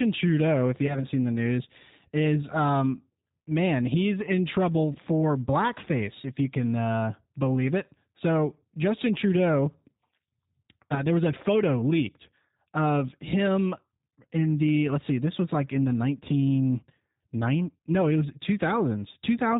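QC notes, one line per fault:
throughout: G.729 codec at 8 kbit/s, plainly audible; speech rebuilt from filter, pitch and sparse pulses sounds rough and synthetic, with nothing above 4 kHz.
0.87–1.05 s, 4.93–4.99 s, 10.94–11.01 s: VoIP packet loss concealed by the speech codec; about 20 ms missing each time, consistent with one lost packet. The decoder extends its last pitch and filter into a fading buzzy tone or coloured noise, and the sound stays weak until it recovers.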